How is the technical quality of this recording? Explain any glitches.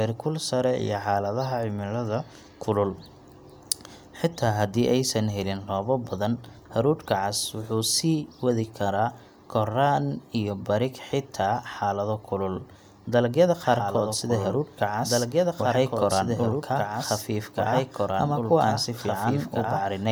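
The recording has one glitch: a doubled audio track from 13.63 s to the end. A second, likely slower capture path adds the speech again about two seconds late and about 5 dB quieter. It cuts in abruptly, so the speech overlaps a dry, delayed replay of itself.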